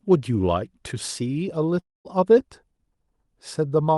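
From 1.79 s to 2.07 s the speech drops out, most likely a long network dropout on the call path. About a quarter second of audio never arrives. The receiver extends the last sound as a fading buzz, then leaves roughly 220 ms of near silence before speech resumes with the missing portion gone rather than delayed. The surrounding audio is band-limited near 12 kHz, which fits an Opus stream around 48 kbps.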